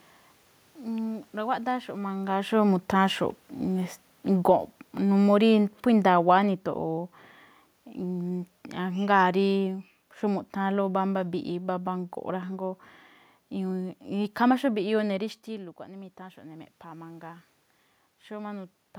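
From 2.27 to 6.63 s, automatic gain falling: the gain control, reacting to loud input, lowers speech and room noise together by about 6 dB, tapering the waveform envelope.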